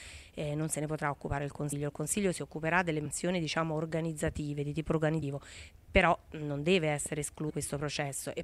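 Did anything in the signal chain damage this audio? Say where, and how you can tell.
Yes, compressed frames skipped, at the decode stage, at 1.71, 3.05, 5.21 and 7.49 s. The audio jumps ahead by roughly 100 to 200 ms, about 4 to 10 frames of 26.1 ms each.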